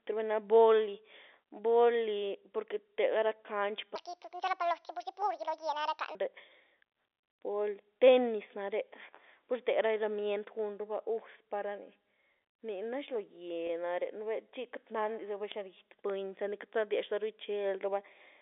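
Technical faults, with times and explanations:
3.96 to 6.15 s, section at the wrong speed: this stretch of speech runs about 1.62 times too fast, so it comes across hurried and noticeably higher, up by roughly seven semitones, before snapping back to normal at 6.15 s. Because pitch and tempo shift together, it isn't a deliberate pitch effect. The likely cause is that this section was resampled or played against the wrong clock, for example in an edit or a player mismatch.
13.67 to 13.69 s, packet loss with pitch repetition: there's a tiny glitch here where about 20 ms of audio went missing, which fits two lost 10 ms packets. The receiver filled the hole by repeating the last pitch cycle, so you hear a brief held, slightly buzzy tone. The gap is short, so it never fades to silence. Since the call runs over G.711 telephone coding, the band is already limited to about 300 Hz to 3.6 kHz.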